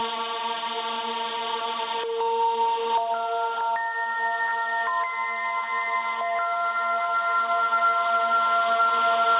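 A recording of sounds with gain pumping throughout, with the level swinging by around 15 dB. That behaviour is likely caused by input gain set far too high with a fast limiter clamping it down. Unlike a noise gate, which would silence the gaps, here loud and soft parts end up closer in level. Band-limiting to 4 kHz fits the narrowband call codec.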